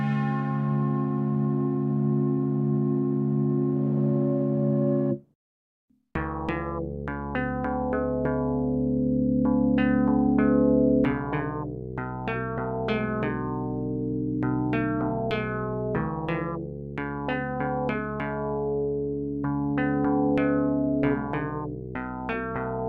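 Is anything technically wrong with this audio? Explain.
No, nothing technically wrong can be heard in this audio; the signal holds steady and intact throughout, with no audible defects in level, timing or frequency content.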